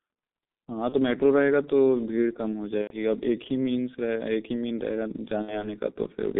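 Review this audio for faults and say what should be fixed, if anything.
G.723.1 codec, throughout: the speech is muffled and hoarse, confined to roughly 200 Hz to 3.7 kHz, with smeared consonants. The heavy damage points to a very low bitrate near 6.3 kbit/s, where 30 ms frames and a slowly updated voice model blur fast articulation.

VoIP packet loss concealed by the speech codec, at 0.89–0.96 s, 2.81–2.96 s and 5.42–5.69 s: the speech turns into a fading buzzy or noisy smear as the decoder extrapolates its last pitch and filter. This fits about 30, 90 and 60 ms of missing audio, and the sound stays weak briefly after each gap.

Prevention: use a wideband, higher-bitrate codec over a more reliable network path, with forward error correction or redundancy to cover lost packets.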